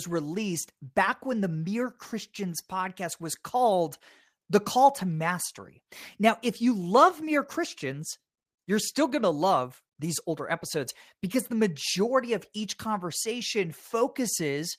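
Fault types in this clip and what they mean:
Nothing in this one trips my ear, so there's no fault to list here.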